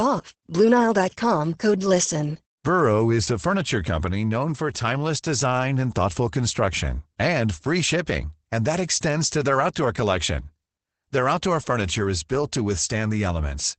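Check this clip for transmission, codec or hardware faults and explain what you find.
One codec fault runs through the whole clip. Opus voice compression, throughout: the speech is coded with Opus's SILK linear-prediction mode in wideband, so nothing survives above 8.7 kHz. The coarsely coded excitation, consistent with a low rate near 12 kbps, leaves the speech plainly muffled, hoarse and slightly robotic.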